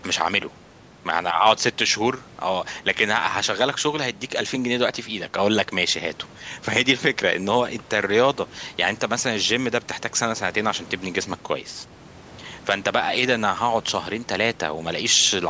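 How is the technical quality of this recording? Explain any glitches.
Nothing in the recording stood out as a glitch on listening, and the speech carries the usual narrowed sound of call microphone processing, with no content above 8 kHz.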